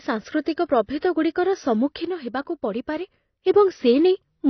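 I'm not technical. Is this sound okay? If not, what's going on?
No. The speech was likely squeezed through AAC compression, a common way of shrinking audio files, set to save a lot of space. To do that, it throws away the high end entirely, so nothing above 6 kHz is left, and it stores the rest only roughly. The codec damage is plainly audible for the whole clip: the voice sounds dull and muffled, missing the crisp edges of sounds like s and t.

Around 0.99 to 1.02 s there is pre-echo. The compression works on short chunks of sound and spreads its small errors across each whole chunk. When a sudden sound starts near the end of a chunk, that error noise leaks into the quiet moment just before it. Here that leak lasts about 39 ms, heard as a brief hiss arriving just ahead of a sharp onset, which itself sounds softened.

From 2.05 to 3.46 s, one channel drops out, likely because one of the two stereo channels carrying the same voice was lost for that stretch. 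With only half the signal arriving, the speech suddenly becomes noticeably quieter during that section, then jumps back to its earlier loudness at 3.46 s. Apart from the change in level, the sound in that stretch is the same.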